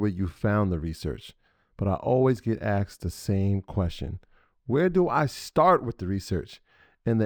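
From start to finish the speech carries imaging from linear upsampling. The rate appears to have been doubled, which fits a move from 22 kHz to 44.1 kHz, by joining samples with straight lines. That weak filter dulls the top of the original band and leaves a mirrored copy between 11.03 kHz and 22.05 kHz, about 35 dB down, heard as a faint metallic shimmer on sibilants. Unlike aliasing, it adds no inharmonic tones folded downward.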